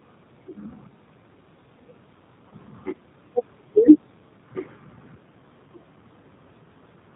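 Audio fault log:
Throughout: G.729 codec. Speech is rebuilt at 8 kbit/s from a filter, a pitch predictor and sparse pulses. Nothing above 4 kHz survives, and it sounds plainly rough and synthetic.
2.49–2.55 s: VoIP packet loss concealed by the speech codec. 30 ms is missing, which fits one lost packet. The decoder stretches its last sound into a fading buzzy tone or coloured noise. Recovery lags briefly.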